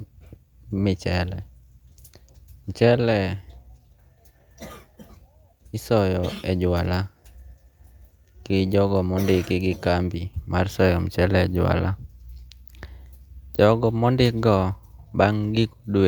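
No technical faults can be heard anywhere in the recording; the speech signal stays steady and intact throughout.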